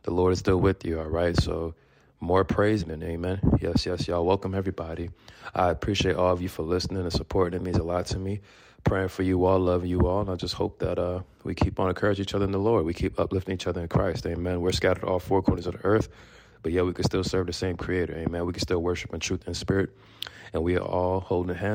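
At 2.81 s the audio skips ahead: roughly a second of material is missing, and the two sides of the jump are butted together with no gap or fill, which indicates audio dropped in transit or discarded when an overfull jitter buffer caught up. From 2.91 to 4.76 s a jitter buffer speed-up follows. Short pitch-period-length pieces are cut repeatedly, removing about 200 ms in total, so the audio runs at 112% of normal speed with unchanged pitch and sounds noticeably hurried.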